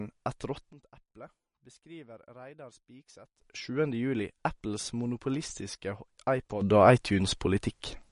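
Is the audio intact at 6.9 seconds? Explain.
No. A sudden gain jump starts at 6.61 s and runs to the end, so at 6.9 s the speech and its background noise both sit about 12 dB louder than before. The level likely changed from one sample to the next with no ramp, giving an abrupt step in loudness.

MP3 compression is also audible at that moment and throughout. Nothing remains above 10.6 kHz, and weak frequency detail flickers in and out between frames, giving a watery, swirly quality with smeared consonant attacks. This is likely from a low bitrate, near 42 kbps.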